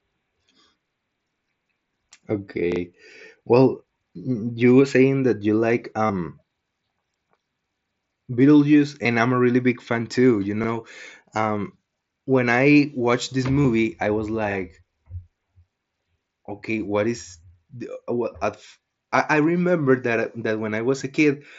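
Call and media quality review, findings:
Repeated buffer, 2.72–2.80 s: same short slice of speech heard three times back to back, hard joins at each repeat, brief stutter. Playback device re-sent its last buffer while waiting on late audio; repeat length fits a 40 ms buffer. Same stutter, one extra play each, at 10.64–10.68 s and 14.52–14.56 s. Nothing dropped from the speech, only delayed.

Concealed Bluetooth headset packet loss, 6.06–6.10 s, right after "saying that you like": 30 ms gap filled with a copied stretch of recent waveform, buzzy hold, slight warble on resume. Link between headset and phone lost packets; receiver patched them from the last ~20 ms. Shorter 15 ms patches at 9.03 s before "I'm a really big", 13.63 s between "when I watched this" and "I was", and 20.99 s. Speech carried over the mSBC headset codec.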